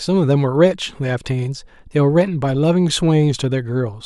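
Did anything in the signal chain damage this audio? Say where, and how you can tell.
No, nothing in the chain audibly damaged this recording. The speech comes through with no sign of trouble at any stage from capture to playback.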